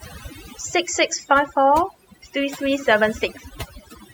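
Overdone noise removal runs throughout: an aggressive reducer cuts bands near its noise estimate, leaving twinkling specks in near-silence.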